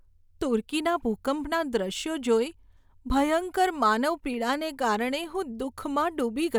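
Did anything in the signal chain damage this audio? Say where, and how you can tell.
No, nothing in this speech recording points to damage at any stage of the signal chain. There is no audible sign that any stage between capture and playback altered the sound.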